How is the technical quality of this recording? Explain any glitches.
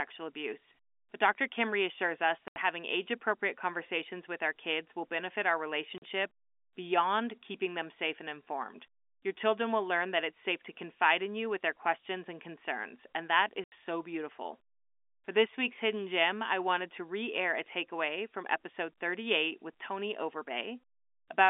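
The speech has three dropouts from packet loss filled with silence, heard over a telephone-band G.711 line. Gaps fall at 2.48 s (80 ms, between "reassures us" and "having age appropriate conversations"), 5.98 s (40 ms, after "kids will benefit our") and 13.64 s (80 ms, between "and concerns and that" and "so beautiful"). Lost packets were replaced by silence, leaving hard-edged holes. Their 40 and 80 ms lengths fit 20 ms packets.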